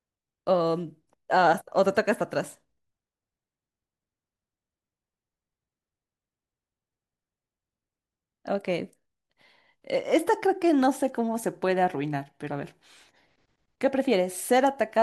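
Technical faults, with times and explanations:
No technical faults detected in the speech recording.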